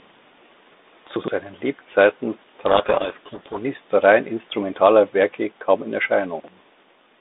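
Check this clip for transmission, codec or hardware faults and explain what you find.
Three faults are present: two chunk-order errors and one stretch of codec payload misreading, all on a telephone-band path whose light ADPCM texture and roughly 250 Hz to 3.7 kHz band fit G.726 at 32 kbit/s.

Chunks out of order, 1.16 to 1.28 s and 6.4 to 6.48 s (just after "kaum in"). In each case a 40 ms block of audio was delivered or written late and played after the blocks that should have followed it. In the first event it lands two blocks late; in the second, one. No audio is lost, but the sequence is scrambled and each splice is a hard join, so these moments sound briefly jumbled.

Codec payload misread, 2.68 to 3.59 s, ending just before "rein instrumentaler". The receiving end unpacks the G.726 code words with the bit order reversed relative to the sender, so each frame decodes as valid but wrong ADPCM differences. 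The adaptive predictor then tracks nonsense, and the speech sinks under harsh, grinding distortion for just under a second. Clean decoding returns once both ends agree on the bit order again.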